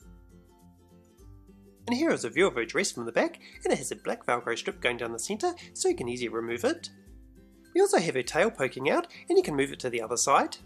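No technical faults are audible anywhere in the audio.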